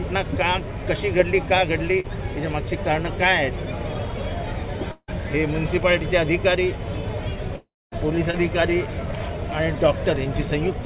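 Short concealed packet loss at 2.00 to 2.06 s leaves a quick smear where about 40 ms of audio failed to arrive and the receiver extended the preceding sound to bridge the gap before blending back. A likely long network dropout follows at 4.92 to 5.10 s. Roughly 160 ms is missing, and the receiver stretches the last sound as a fading buzz or hiss that dies into about 30 ms of silence before the audio resumes past the lost part. A second likely dropout at 7.56 to 7.94 s loses about 360 ms. Its fill decays into about 230 ms of silence. Short concealed packet loss recurs at 8.31 to 8.35 s as a brief smear where about 20 ms was patched over. Throughout, the call path has nothing above 4 kHz, which fits G.711 mu-law.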